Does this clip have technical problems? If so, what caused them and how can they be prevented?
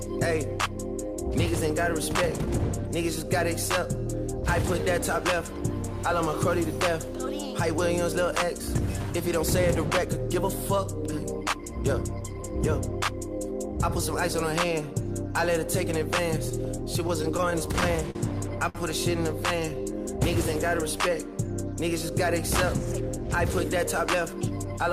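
Yes. Repeated stalls (stutter) run from 16.49 to 18.17 s. Late packets emptied the jitter buffer eleven times. Each hold reached at most 45 ms. A steadier network path with less jitter would prevent this.

A short stall from a late packet holds the sound for 57 ms at 18.69 s. One packet arrived late, so the last sound was stretched. A slightly deeper jitter buffer would absorb such a delay.

A jitter buffer slow-down from 19.69 to 20.08 s plays at 89% speed. Repeated pitch periods add 52 ms at unchanged pitch. Starting with enough buffered audio avoids this refill.

A jitter buffer speed-up from 23.09 to 24.79 s runs at 106% speed. About a tenth of a second was trimmed to cut excess delay. Keeping packet arrival even prevents bunched packets from forcing it.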